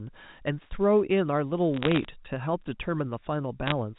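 A speech clip with brief bursts of sharp ticking crackle from 1.74 to 2.05 s and 3.66 to 3.72 s: bit errors on a digital phone line, flipping bits in individual telephone-coded samples.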